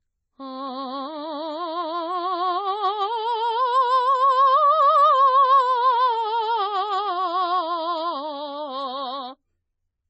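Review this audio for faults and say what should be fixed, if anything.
The music was likely passed through two lossy encoders in a row, a case of transcoding between lossy codecs. The sound points to a very low-bitrate MP3 stage, around 22 kbit/s, re-encoded to AAC-LC at about 32 kbit/s. Throughout the clip, nothing is heard above 8 kHz, so the top end is dull and airless. The second encoder spends its scarce bits reproducing the first one's artefacts, then adds its own, so both layers of artefacts sit together on every passage. To prevent this, encode once from the original uncompressed master at an adequate bitrate instead of re-encoding an already compressed file.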